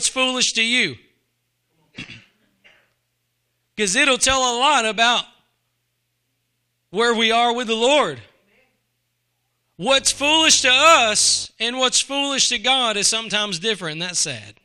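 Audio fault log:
9.96 to 11.46 s, mains buzz: a steady, raspy buzz sits under the speech for about 1.5 s, ending just before "and what's foolish to". Sharp switching spikes, twice per 50 Hz cycle, leak in and build harmonics reaching several kHz, sitting roughly 30 dB below the signal.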